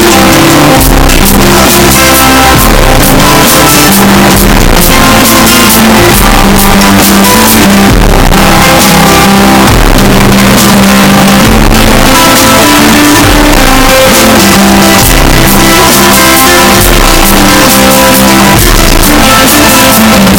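Sounds, buried under loud, harsh distortion throughout, likely from signed and unsigned mixed up on 16-bit samples, so the waveform slams between the extremes of its range and the spectrogram fills with broadband energy.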